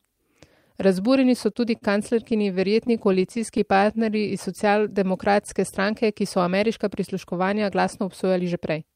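At 1.53 s and again at 1.77 to 1.84 s, just after "so tudi", there are two short stalls from late packets. Each packet arrived after it was due, so the receiver held the last sound until it turned up, about 18 ms the first time and 45 ms the second, and then carried on with nothing skipped. Each stall sounds like a brief hang with a faint buzz or dip. On a spectrogram the harmonics run flat and unchanged for those few milliseconds, and the waveform shows a short run of near-identical repeated cycles.

From 2.32 to 3.6 s come scattered short gaps. About ten packets went missing or late one at a time, and each hole, roughly 10 ms long, was patched by extending the sound before it. Together they cover around a tenth of a second, a small share of the stretch. They come through as light ticks and tiny smears. On a spectrogram they show as thin vertical seams where the texture briefly freezes or blurs.

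From 3.36 to 5.62 s, leading into "stranke ki so ameriška", the jitter buffer slow-down is at work. The buffer was short of audio, so the receiver rebuilt a reserve by repeating single pitch periods and bits of pauses, adding 146 ms in all. Playback runs at about 94% speed while the pitch stays the same, so sounds are drawn out. The spectrogram shows stretched segments with unchanged harmonic spacing, and the waveform shows duplicated cycles.

From 7.63 to 8.93 s the jitter buffer speed-up does the reverse. With more audio queued than the buffer targets, the receiver cut short pieces of one or a few pitch periods, about 150 ms in total. Playback runs at about 109% speed with the pitch unchanged, which makes the passage sound hurried. Syllables look compressed in time on the spectrogram, harmonic spacing stays the same, and the waveform shows small splice points where cycles were dropped.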